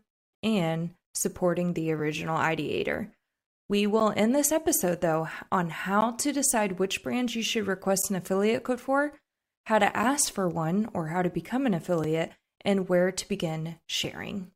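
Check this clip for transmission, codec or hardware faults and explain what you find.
The clip has one recurring fault, a gap between stream segments, heard six times in this speech at 4.00, 6.01, 8.02, 10.03, 12.04 and 14.04 s. The player stitches 2.0-second segments whose timestamps leave a small hole, and it fills each with silence, adding 3 to 12.5 ms. Each sounds like a brief hard-edged dropout, for example between "this episode though on" and "to decide which brands". No audio is lost, only delayed.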